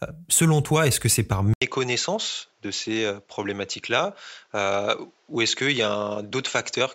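At 1.54 s the sound drops out for 80 ms, then returns duller and somewhat quieter, with nothing above 7.6 kHz and a new, faint noise floor. This is likely an input switched to a poorer device. The brief gap and changed background distinguish it from a simple filter change.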